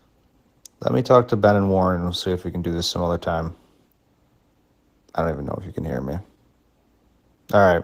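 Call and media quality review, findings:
Opus voice compression across the whole clip, start to end. Plainly audible codec damage: speech comes out a bit hoarse and slightly robotic, with coarse, grainy texture. Likely hybrid Opus, with SILK coding the lower band and a thin CELT layer on top, so highs are present but sparse. Consistent with roughly 16 kbps in 20 ms frames. Bump the bitrate.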